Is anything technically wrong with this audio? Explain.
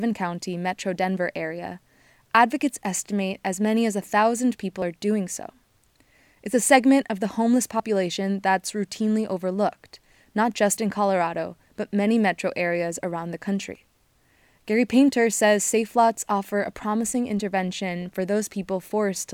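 Yes. At 4.82, 7.80, 10.78 and 13.75 s the speech skips briefly, roughly 20 ms each time, about every 3 s. This is likely audio missing between chunks, lost as a recorder closes one 3 s block and opens the next. The waveform shows an abrupt join with no gap, and the spectrogram shows a hard vertical seam.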